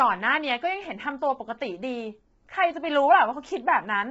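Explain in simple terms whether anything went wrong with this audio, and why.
Yes, something's off, and it runs through the whole recording rather than at one spot. The speech sounds rough and grainy, with a kind of hiss sitting between the tones of the voice, and nothing comes through above about 7.7 kHz, so the top end is missing. That points to low-delay AAC compression, likely the kind video-call apps use, squeezed hard. Its very short chunks can't capture the voice's tones cleanly, so detail is lost.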